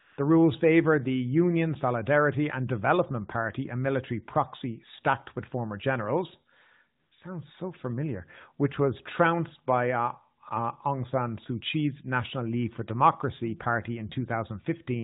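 AMR comfort noise appears twice, from 0.0 to 0.18 s and from 7.0 to 7.12 s. The phone treated these stretches as silence and sent no speech frames. The receiver filled each gap with steady, smooth synthetic noise. The real background drops out briefly.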